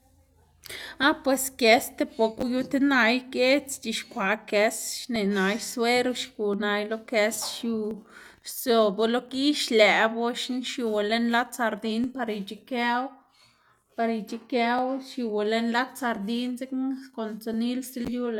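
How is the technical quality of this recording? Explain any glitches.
The recording has a recurring timing fault. From 1.03 s to 17.54 s, about fifteen clicks fall at a steady 1.38 s spacing. This pattern is likely clock drift buffer slips: two devices running on slightly different clocks, off by around 500 parts per million, so a buffer between them periodically drops or repeats a few dozen samples. Each slip is a brief click during the speech. A waveform shows small discontinuities at regular intervals, and a spectrogram shows evenly spaced thin vertical broadband lines.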